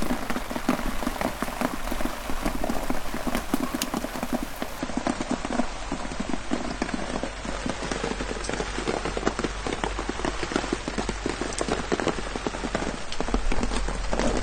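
From 4.79 s to the end at 14.43 s, the treble suddenly thins, with nothing above 9.1 kHz, and a swirly, grainy edge appears, with no gap at the switch. This is an adaptive stream at a lower bitrate, consistent with AAC dropping from 96 to 32 kbit/s.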